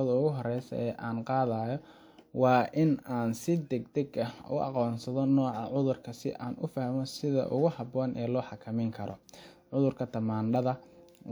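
Nothing stood out as a technical fault on listening to the recording.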